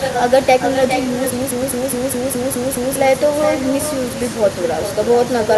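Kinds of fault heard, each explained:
Echo with no canceller: the far end's loudspeaker feeds its microphone, so each phrase returns about 9 dB quieter and thinner, trailing by roughly 400 ms throughout.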